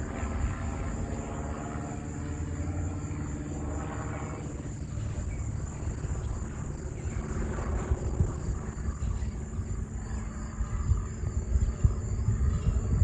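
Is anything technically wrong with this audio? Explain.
Yes. From 4.38 s to the end, a call bitrate drop cuts the encoder from 96 to 15 kbps, narrowing bandwidth from 20 kHz to 12 kHz, so the sound turns coarse and duller.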